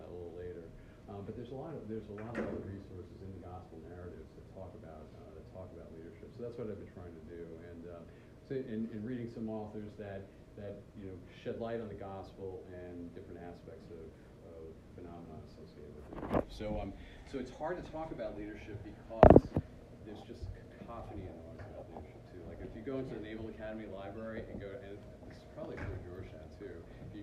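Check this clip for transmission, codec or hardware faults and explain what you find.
Nothing in the clip points to a transmission, codec or hardware fault.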